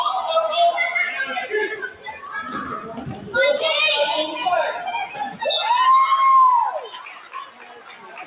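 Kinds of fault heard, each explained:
Noise suppressor applied to music or sounds: a speech-tuned suppressor stays on through the whole clip and treats steady tones and decaying tails as noise, so the level swings by around 15 dB and the sound pumps and thins. Attacks still come through, which sets it apart from a plain dropout.
Sound cut by the noise suppressor: particular stretches sink further, by about 14 dB at 1.73 to 2.32 s and from 6.76 s to the end, and by about 5 to 9 dB in shorter dips. Held parts fade while sharp onsets survive, unlike an even gain drop.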